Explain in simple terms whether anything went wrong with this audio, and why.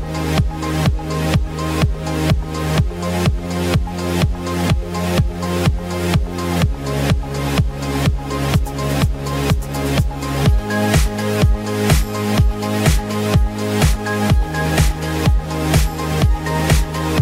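Nothing went wrong with this audio, as no technical fault can be heard anywhere in it.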